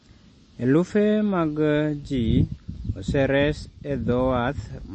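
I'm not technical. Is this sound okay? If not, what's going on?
No, not quite. All the way through, the speech sounds a bit dull and watery, with a swirly, metallic edge on s sounds and a smearing where sounds start sharply. That's most likely heavy MP3 compression: the file was squeezed hard to save space, so the treble above about 8.4 kHz is gone entirely, and the quieter details flicker in and out, which gives that underwater feel.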